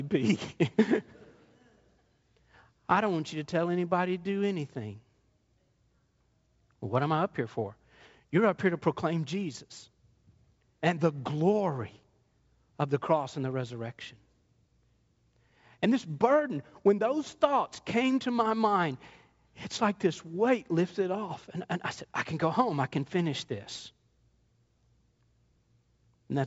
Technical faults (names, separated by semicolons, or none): none